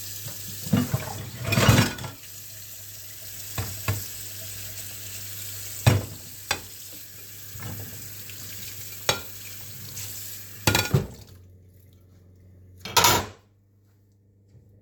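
A recording of sounds that, from 11.29 to 13.2 s, turns slightly slow and sags in pitch by about 1.5 semitones. This is a wrong sample rate fault: the audio plays back at 0.919 of its proper speed without resampling, which fits 48 kHz material being clocked out at 44.1 kHz, so tempo and pitch drop together.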